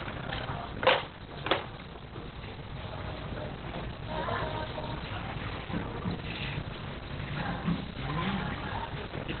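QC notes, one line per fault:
Throughout: Opus compression. Nothing above 4.2 kHz survives, so the audio sounds muffled, hoarse and heavily degraded. The narrow band and rasping texture point to Opus likely running in its speech-oriented SILK mode at narrowband, which fits a bitrate near 12 kbps.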